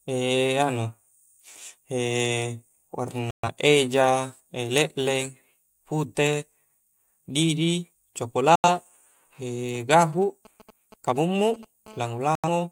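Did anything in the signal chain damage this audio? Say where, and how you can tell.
Yes. The damage comes from three separate mechanisms, two of them from a nearby phone.

The digital broadcast dropout occurs at the reception and decoding stage, with the sound muting from 3.31 to 3.49 s, from 8.56 to 8.69 s, and from 12.35 to 12.49 s. The gaps last about 128 ms and 85 ms, which fits the decoder losing three and then two frames and muting until clean ones return. What a hole contains is gone, not delayed. That distinguishes it from a network buffer stall, which pauses the audio and then resumes.

The GSM signalling bursts come in through the analogue wiring from 9.75 to 11.65 s. A 2G phone transmitting short groups of radio bursts has its pulses rectified by the audio circuitry, producing a galloping dit-dit-dit of short buzzes at about 217 Hz, roughly 20 dB below the speech. Unlike the steady buzz that follows, this comes in broken clusters, the pattern of a phone negotiating with the network rather than holding a call.

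The GSM phone buzz is continuous from 11.86 to 12.67 s. It is the same rectification in the analogue path, but the phone is now transmitting steadily at about 217 bursts per second. The result is a hard, raspy tone about 30 dB below the speech, full of harmonics and unrelated to it. The 217 Hz fundamental is not a multiple of 50 or 60 Hz, which rules out mains hum. The last dropout, at 12.35 s, falls within this buzz.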